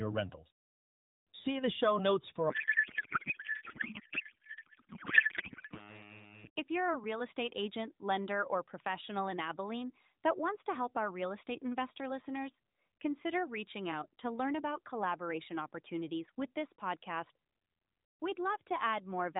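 Right after "the show notes for", from 2.50 to 6.06 s, a codec payload misread turns the AMR narrowband speech into garbled, warbling noise that barely tracks it. The misreading points to octet-aligned frames decoded as bandwidth-efficient. On a spectrogram, harmonic structure gives way to smeared, patchy energy below 4 kHz, and the waveform envelope stops matching syllables.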